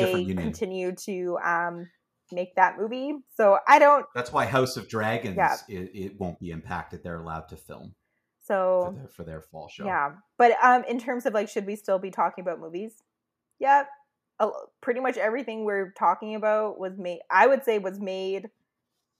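The clip is speech with two faults close together. From 3.71 to 3.75 s, a loud peak has a harsh, crackling edge. This is microphone overload. The peak tops are flattened, about 3 dB past the converter's limit, with roughly one sample in twenty cut off. The likely cause is an input volume set too high for that burst. At 4.08 s, the voice and the background both drop in level together, by about 2 dB, in a single step. This is the microphone volume being stepped down. It comes about a third of a second after the distorted peak. The likely cause is the call software detecting the clipping and lowering the device's input volume once.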